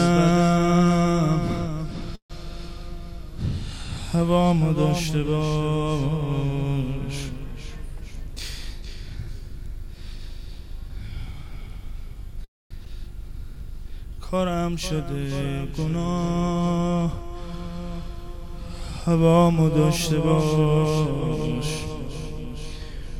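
Packets were likely held up in transit at 2.15 s, and the jitter buffer ran empty. The receiver stretched the last sound into a brief fading buzz that drops to near-silence for about 100 ms. This call audio freeze inserts roughly 140 ms of delay, and the audio resumes where it stopped.

From 8.01 to 11.61 s the jitter buffer held more audio than its target, so the receiver trimmed short pitch-period pieces again and again. This jitter buffer speed-up plays the audio at about 104% speed with pitch unchanged, removing around 150 ms in total.

At 12.44 s another call audio freeze occurs, likely with the same empty-buffer fill. This time the fading buzz gives way to about 230 ms of silence, adding roughly 260 ms of delay.

Between 12.85 and 12.88 s, a stretch of about 150 ms was discarded while later audio was already queued. This skip ahead makes playback jump forward almost seamlessly, with the two sides spliced nearly directly.

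From 13.26 to 15.33 s the buffer was rebuilding its reserve, so the receiver repeated single pitch periods and bits of pauses. This jitter buffer slow-down runs the audio at about 95% speed, adding 112 ms and drawing sounds out.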